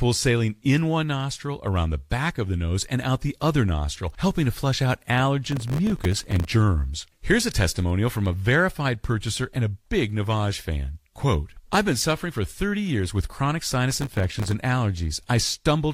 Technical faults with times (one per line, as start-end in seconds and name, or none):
5.52-6.49 processor overload crackle
13.91-14.53 processor overload crackle